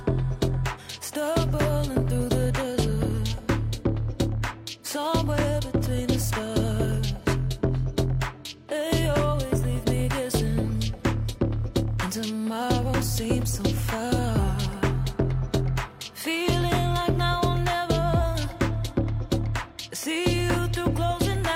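No technical faults can be heard anywhere in the clip. The audio runs without any dropout, interruption or unexpected change in level or tone.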